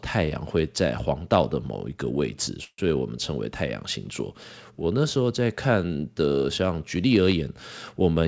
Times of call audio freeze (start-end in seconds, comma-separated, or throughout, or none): 2.64-2.80